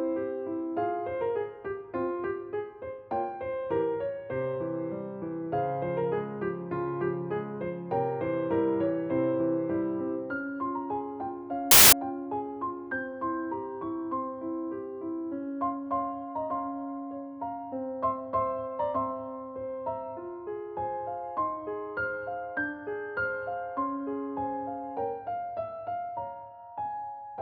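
At 11.71 to 11.93 s, file tags played as audio: an embedded cover picture read as samples gives very loud white noise with hard edges, unlike a codec glitch's smeared burst.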